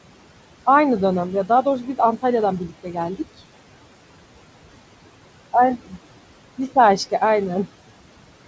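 Noise suppressor artifacts run through the whole recording. The suppressor treats the steady room noise, sitting about 17 dB below the speech, as noise and pulls those bands down by about 18 dB frame by frame. The background sinks in the gaps and swells back under each phrase. The band-limited top end, with nothing above 8 kHz, fits a G.722 wideband call path.

Speech cut by the noise suppressor occurs between 2.68 and 2.96 s. Here the suppressor mistakes part of the speech for background and turns it down along with the noise, by up to about 12 dB at the deepest point. Only around a tenth of a second within that stretch is affected, so the loss is brief. Quieter sounds there come across as swallowed and faint.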